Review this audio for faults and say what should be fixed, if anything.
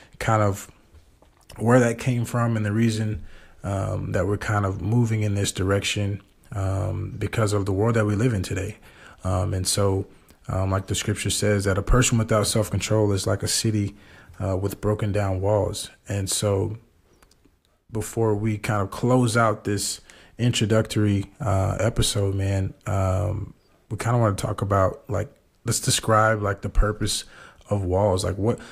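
At 4.48 s there is a repeated buffer: a 1.45 ms slice, which fits a 64-sample buffer, plays twice because fresh audio arrived late. It is heard as a click or brief buzz. The waveform shows that slice duplicated with a hard step at the join, and the spectrogram shows a thin vertical broadband line. Enlarging the playback buffer or giving the audio thread higher priority would prevent this underrun.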